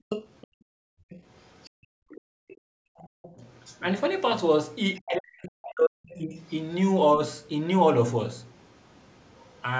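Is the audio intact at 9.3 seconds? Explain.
No. From 8.49 to 9.61 s a second voice sits faintly underneath, far below the main speech. This is the other side's voice leaking through, most likely far-end sound from the loudspeaker that the echo canceller did not fully remove from the microphone.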